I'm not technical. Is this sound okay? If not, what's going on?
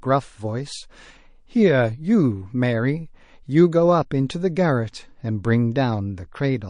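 No. The whole recording has a watery, swishy quality with dulled treble and smeared s sounds, likely from heavy MP3 compression squeezing it into too few bits.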